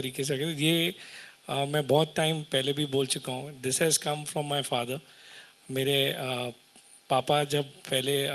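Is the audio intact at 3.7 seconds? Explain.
Yes, the audio is intact at 3.7 seconds, with only the ordinary coding character of the call path audible there.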